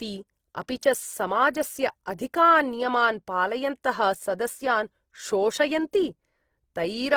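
From start to finish the speech has a grainy, rough texture, most likely from Opus compression in its music mode, run at a low bitrate around 16 kbps. Starved of bits, the encoder refills bands with folded or noisy content, so tones sound sandpapery even though the bandwidth stays wide, up to about 20.3 kHz.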